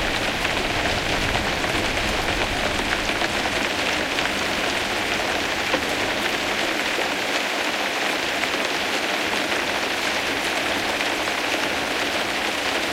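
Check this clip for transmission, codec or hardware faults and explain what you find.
Nothing stood out on a careful listen, so there's no fault to report for this audio.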